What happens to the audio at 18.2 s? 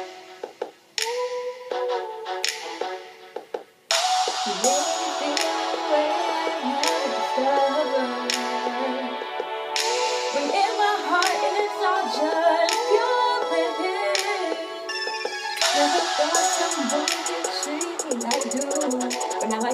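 From 18.02 s to 19.73 s a time-stretched section speeds the audio to about 1.84 times its pace, likely by dropping short pieces so the pitch holds. It sounds rushed, and a spectrogram shows events squeezed together at unchanged frequencies.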